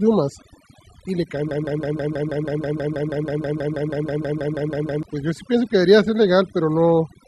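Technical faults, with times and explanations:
Throughout: overdone noise removal. The noise reduction was pushed way too hard here, so any frequency band sitting close to what it took for noise gets pulled right down or switched off. The background drops and breaks up, with little twinkling specks popping in and out, and the quieter parts of the speech get dragged under along with the noise.
1.51 to 5.03 s: broken-record loop. A 0.16 s fragment plays back to back, exactly the same each time, 22 times in a row, so you get that stuck, stuttering machine-gun effect for about three and a half seconds. The likely cause is the player, encoder or stream stalling and resending the last chunk it had. Whatever should have played in that stretch is simply gone.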